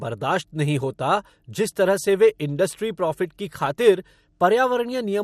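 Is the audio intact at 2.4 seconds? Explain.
No. At 2.4 seconds, as throughout the speech, the signal has likely been squeezed through MP2 compression with too few bits, which fits a bitrate around 80 kbps. Upper sub-bands switch off and flicker while the remaining bands are coarsely quantised, leaving a dull, gurgling, granular sound.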